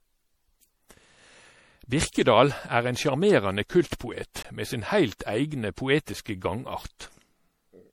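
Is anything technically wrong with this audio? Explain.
Yes. The speech is likely suffering generation loss: repeated lossy re-encoding, perhaps about four passes consistent with 64 kbit/s MP3, stacks quantisation noise, leaving swirly, hollow sound with blurred attacks and nothing above 19.4 kHz.

Two blocks of digital silence also occur, from 4.43 to 4.45 s (20 ms) and at 6.14 s (5 ms). Samples were zeroed, probably through an unfilled output buffer, cutting abruptly to silence and back.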